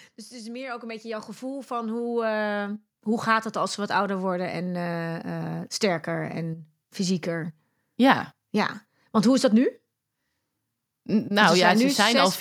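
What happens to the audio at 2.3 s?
At 2.3 s, automatic gain rising is underway (0.29 to 2.85 s): the gain control lifts the level about 13 dB, swelling voice and background together, a steadily widening waveform envelope.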